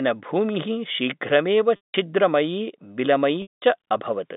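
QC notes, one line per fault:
1.76 s and 3.42 s: packet loss with pitch repetition. Gaps of 180 ms and 200 ms occur. The last pitch period repeats to bridge each gap, so a brief buzzy hold fades over about 50 ms into silence. Speech then resumes through a short cross-fade.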